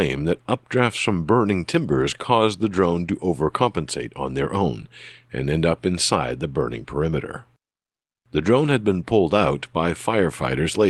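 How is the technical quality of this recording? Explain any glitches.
No glitches can be heard in this speech recording: the signal stays steady throughout, and its high end stops at around 12 kHz, which fits a call path using Opus at about 24 kbps.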